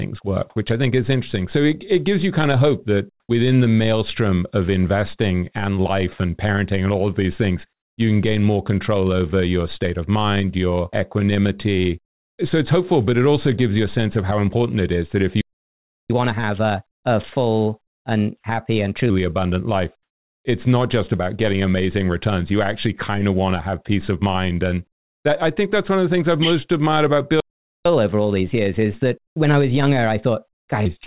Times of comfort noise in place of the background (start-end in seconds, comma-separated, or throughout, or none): 3.20-3.29, 29.27-29.36